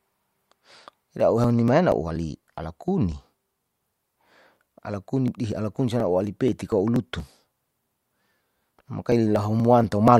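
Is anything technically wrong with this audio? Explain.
Yes. From 0.24 s to 10.08 s the speech carries periodic USB or driver dropouts, repeating every 0.24 s. Something blocks the audio path at that fixed interval. Each time, roughly 10 ms is skipped outright. The result is a steady train of ticks riding on the voice.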